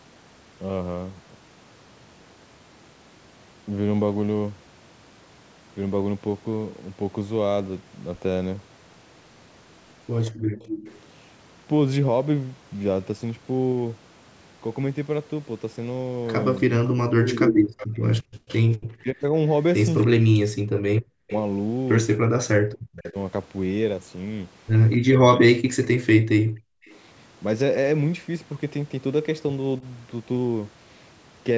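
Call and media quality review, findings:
Echo leak at 10.34–11.0 s, 16.56–18.56 s, 21.28–21.39 s and 26.83–26.97 s: delayed repeat of the speech, 262–303 ms behind, faint at most points but about as loud as the original near 17 s. Likely far-end echo canceller passing residual loudspeaker pickup. Spectrogram shows duplicated harmonic striations, shifted right.

Background gated by the echo canceller, 10.41–10.59 s: room noise ducks about 40 dB for roughly a fifth of a second, then returns. Suppressor clamps mic gain while the loudspeaker plays. Waveform shows the noise floor pinched nearly flat. Spectrogram shows a brief broadband vertical gap.

Speech suppressed in double talk at 16.67–21.3 s, 22.22–23.16 s and 24.98–26.81 s: the talker dips deeply or cuts out in pieces, with around two seconds lost in the first span. Likely echo canceller attenuating both sides during overlap. Spectrogram shows holes in the speech energy.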